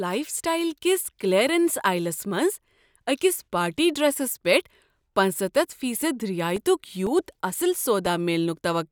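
From 6.56 s to 8.56 s, just after "پیٹھ پنژستَتھ فی صد", the speech shows periodic USB or driver dropouts: about five short ticks spaced exactly 0.5 s apart. Each time, something stalls the USB link or audio driver, and roughly a millisecond of audio is lost and replaced by silence. These tiny gaps are heard only where speech is present. Their clockwork spacing sets them apart from random clicks or network packet loss.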